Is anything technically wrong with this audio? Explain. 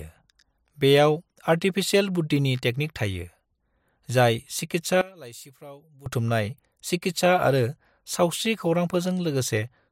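Yes. From 5.01 to 6.06 s the speech drops by about 21 dB, leaving a weak residue before normal level returns. The likely cause is one channel inverted: with reversed polarity, the shared content cancels on mono summing, and only channel differences remain.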